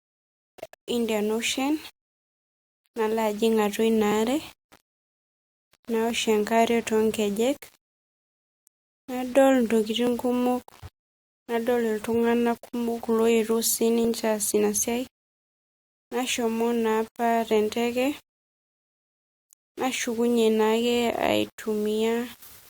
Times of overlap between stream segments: 6.10, 10.07, 14.05, 16.04

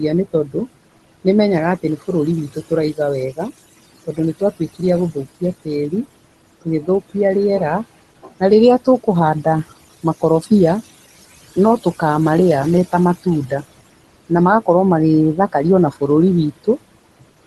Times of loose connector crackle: none

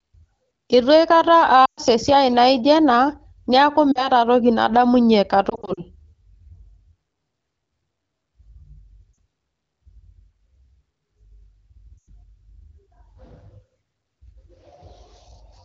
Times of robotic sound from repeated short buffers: none

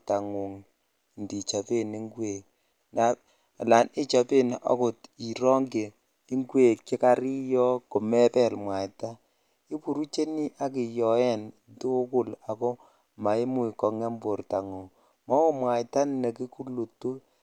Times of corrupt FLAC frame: 1.47, 14.82

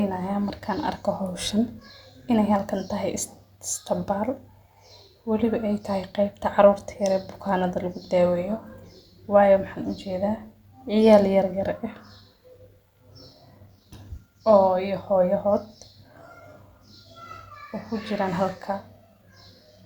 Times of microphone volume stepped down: none

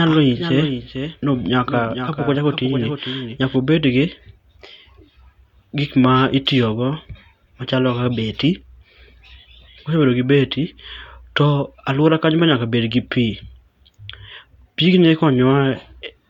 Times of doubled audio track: 0.00-3.56

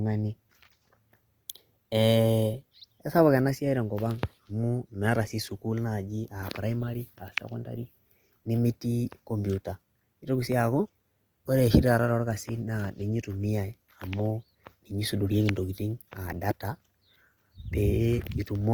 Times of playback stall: none

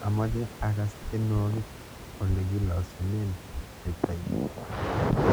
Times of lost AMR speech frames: none

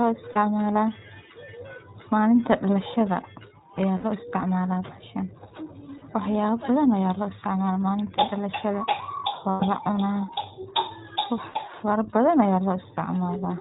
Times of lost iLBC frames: 0.32-0.38, 3.98-4.05, 5.98-6.04, 9.50-9.64, 11.50-11.54

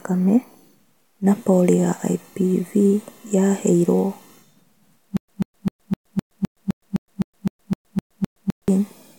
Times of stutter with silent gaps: 5.17-8.68

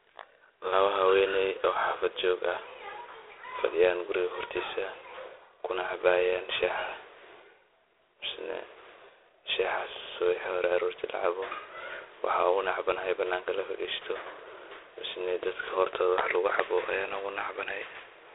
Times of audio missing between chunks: none

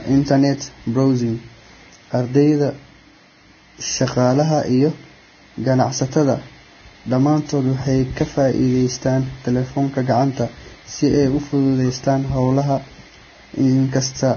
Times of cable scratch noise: none

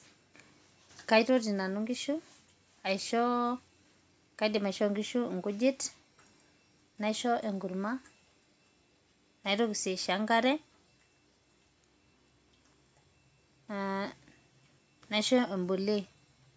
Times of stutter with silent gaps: none

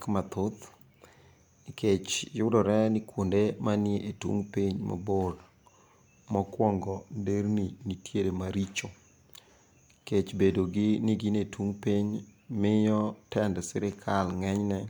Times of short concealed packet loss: none

